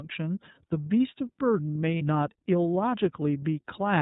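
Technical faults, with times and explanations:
throughout: iLBC codec. The speech is confined to narrowband, with nothing above 4 kHz, so sibilants lose their hiss and the sound is muffled. It also has a plainly audible rough, slightly synthetic grain. That grain comes from coding each 30 ms frame's excitation independently, at a rate that fits the 13.33 kbps mode. A simple low-pass filter would dull the top the same way but leave the remaining band smooth and natural. Here the texture itself is coarsened.
1.98 to 2.02 s: lost iLBC frames. For about 30 ms, which points to a single lost frame, the decoder fills the gap by repeating the last pitch cycle blended with noise. The result is a brief held, faintly buzzy vowel rather than silence or a click, which distinguishes it from a plain dropout or a hard cut. Because each iLBC frame decodes on its own, the speech returns to normal immediately afterwards, with no lingering smear.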